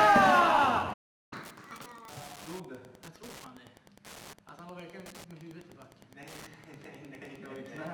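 Wi-Fi interference runs through the whole clip. A nearby Wi-Fi radio's beacon, repeating every 102.4 ms, is picked up and rectified by the audio circuit. It is heard as a steady ticking about ten times a second, about 25 dB below the sound.

At 0.93 s a playback stall begins. The sound stops dead for about 0.38 s and resumes at 1.33 s. The player likely ran out of data or had its thread blocked, leaving the output silent until it recovered.

Catch-up at higher speed follows from 1.33 s to 2.10 s. The player resamples its backlog to play it 1.5 times faster. Speed and pitch both rise, by about seven semitones. Then playback returns to normal.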